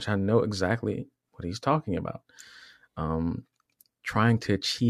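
At 3.66 s a single lost LE Audio frame interrupts the speech. The gap is only about 7.5 ms, which fits one 7.5 ms LC3 frame going missing over the Bluetooth link. The decoder fills it by reusing the previous spectrum with randomised signs, so instead of a click or a hard drop to silence there is a brief grainy smear. Because only one frame is lost, there is no gradual fade. The LC3 coding around it is light, likely at 64 kbps.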